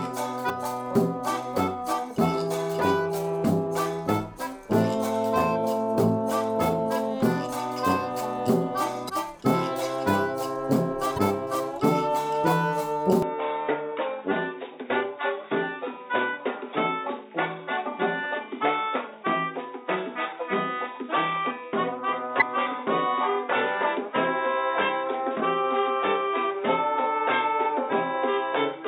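Damaged data in a compressed stream at 0.46 s, 9.05 s and 11.14 s: corrupted frames make the decoder lose sync and hunt for the next header, leaving brief glitches of about 45 ms.

Input switched to a poorer device at 13.22 s: with no gap and little level change, the sound turns dull and boxy to the end, with nothing above 3.8 kHz and a faint new noise floor. This likely comes from a switch to a narrower-band microphone or headset profile.

Damaged data in a compressed stream recurs at 13.65 s and 22.38 s, with the same short glitches.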